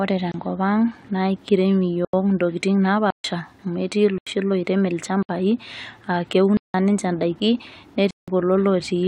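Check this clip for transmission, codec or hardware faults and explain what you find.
Seven blocks of digital silence cut through this speech, at 0.32, 2.05, 3.10, 4.18, 5.23, 6.57 and 8.11 s, lasting from 26 to 171 ms. The sound cuts out and back with no fade, likely a buffer not filled in time (the 85 and 171 ms gaps fit 4096- and 8192-sample blocks).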